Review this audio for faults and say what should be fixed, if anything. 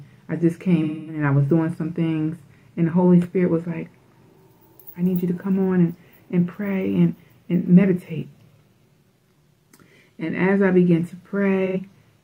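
There's AAC frame loss with concealment in two spots: about a quarter second from 0.82 to 1.23 s, roughly six frames' worth, and a shorter 85 ms gap at 11.66 to 11.77 s, about two frames. In both, the decoder papered over missing frames by reusing the last good spectrum, so you get a smeared, noisy patch instead of the real audio. To prevent it, fix the packet loss upstream, for example with a retransmitting transport or FEC on the stream.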